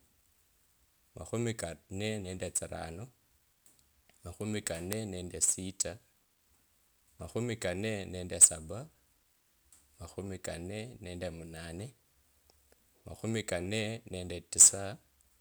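At 4.93 s and again at 11.57 s, a flipped bit in memory or on a digital link throws samples off by a power of two (three in a row the first time, a single sample the second), producing a bit error spike: one sharp, broadband tick unrelated to the speech.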